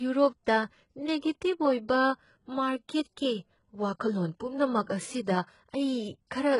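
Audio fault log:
Throughout: HE-AAC compression, likely at a very low bitrate around 12 kbps. The encoder codes only the lower spectrum and fakes the treble by copying lower bands upward, so the speech sounds heavily damaged, with gritty, lispy s sounds and nothing above 11 kHz.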